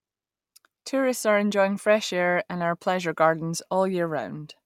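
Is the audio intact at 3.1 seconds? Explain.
Yes, the audio is intact at 3.1 seconds, with no fault audible at that moment.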